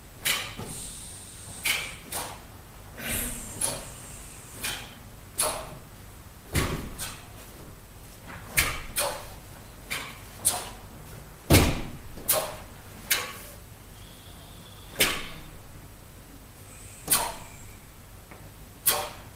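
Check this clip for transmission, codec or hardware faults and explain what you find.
Nothing jumps out here, so there's nothing to flag on this one.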